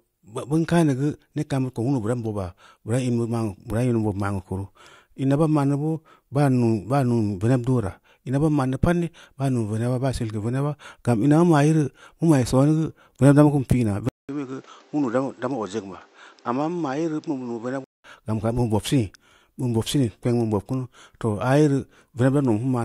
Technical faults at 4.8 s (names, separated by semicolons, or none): none